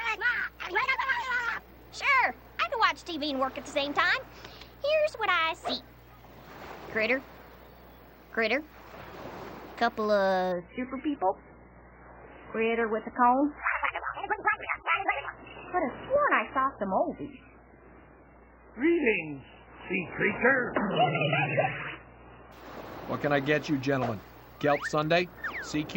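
At 10.52 s the audio abruptly switches to an adaptive stream at a lower bitrate and stays there until 22.52 s, a 12-second stretch. The player has dropped to a much cheaper encoding, and the sound turns dull and smeared, with warbling, watery codec artefacts. Nothing survives above 3 kHz, which fits a very low MP3 rate of around 8 kbit/s. On a spectrogram the upper bands vanish at a hard vertical edge with no gap, then return just as suddenly.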